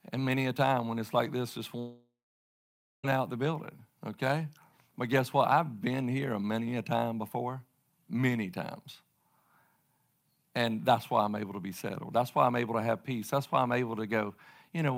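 Speech, with a long network dropout from 1.79 to 3.05 s after "it's like this just": the last sound smears into a fading buzz, then about 0.89 s of silence follows before audio resumes at "out the", with roughly 1.24 s likely lost in transit.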